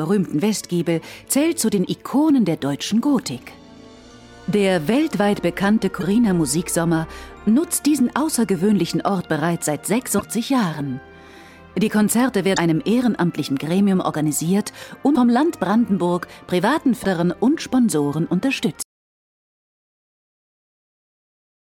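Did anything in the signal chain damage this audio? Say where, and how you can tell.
Yes. At the codec stage, short glitches of about 30 ms each occur at 1.84, 6.00, 10.18, 12.55, 15.14 and 17.02 s. Each is a brief chirp, noise burst or short hole where the sound also skips slightly forward. That duration fits roughly one 26.1 ms MP3 frame, so this is most likely a broken MP3 bit reservoir. A frame went missing, and the next frame then read its borrowed bits from the wrong data. A plain click or packet-loss concealment would not produce that jump-plus-burst pattern.

At the capture or storage stage, there is an audio dropout to silence from 18.82 s to the end. The signal cuts off abruptly and the rest of the clip is silent, with no room tone or noise floor. That points to the input being lost while the recorder likely kept writing silence. A codec fault or a network gap with concealment would not leave such flat, total silence.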